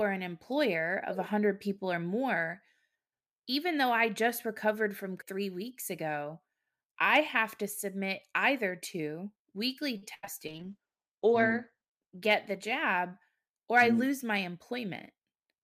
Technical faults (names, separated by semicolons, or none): short stall from a late packet; burst of packet loss; short concealed packet loss; call bitrate drop; jitter buffer speed-up